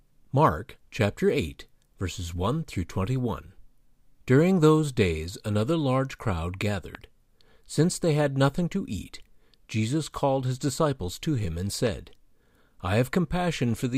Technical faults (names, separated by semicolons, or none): loud pop